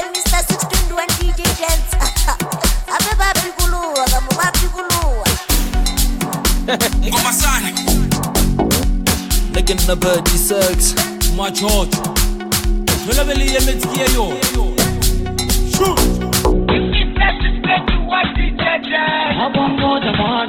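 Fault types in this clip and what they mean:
Adaptive stream at a lower bitrate: from 16.52 s quality drops suddenly without a gap. Nothing sounds above 4.1 kHz, and codec artefacts rise, pointing to a much lower Opus bitrate.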